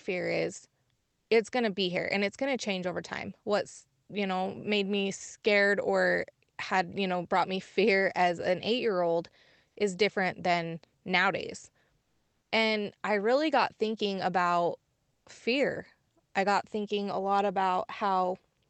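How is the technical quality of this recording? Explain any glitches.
The audio came through a call path, with the high end stopping around 8 kHz, which fits Opus at roughly 24 kbps. The glitches are three patches of comfort noise in place of the background: 0.95–1.29 s, right before "it's going to be"; 12.01–12.51 s, after "is different than nowadays"; and 15.11–15.25 s, between "really got thinking about" and "fear I got thinking." In each of these pauses the real room tone gives way to smoother, different-sounding noise about 3 to 5 dB quieter. The likely cause is discontinuous transmission: the sender stopped sending during the pause and the receiver filled the gap with synthetic noise.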